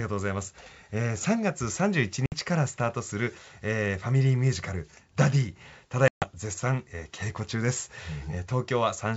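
Packet loss on the ADPCM call cuts the speech at 2.26–2.33 s (60 ms lost) and 6.08–6.25 s (140 ms). Each gap is a vertical blank in the spectrogram with sharp edges. The G.722 decoder's predictor loses step, so the speech returns slightly distorted before settling.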